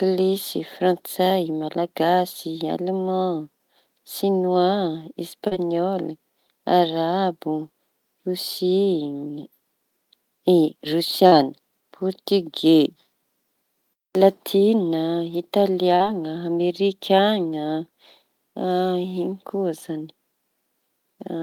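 At 5.47 to 5.54 s and again at 11.27 to 11.35 s the speech shows short concealed packet loss. About 40 ms of audio failed to reach the decoder in time at each point, and the receiver synthesised roughly 38 ms and 43 ms of replacement by extending the preceding sound before crossfading back into the real signal. Each event comes across as a brief smear or wobble in the speech rather than a clean gap.

At 15.95 to 16.03 s there is a burst of packet loss: consecutive packets were lost or arrived too late to be played. The concealer carried the last sound forward for about 45 ms while attenuating it, producing a short held tone or fading hiss, then jumped ahead. The roughly 40 ms of speech in between is absent, so the audio resumes slightly further along than where it broke off.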